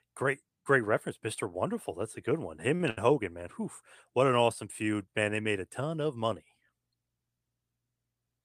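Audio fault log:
2.75–2.81 s and 2.90–2.98 s: short stall from a late packet, twice, just after "a good one". Each time a packet arrived late and the jitter buffer ran dry. The receiver held the last sound until the data came, filling about 45 ms and then 72 ms. Nothing is lost. The sound picks up where it stopped. The stretched bits come across as a brief drag with a faint buzz or dip, and the playback delay grows by those amounts.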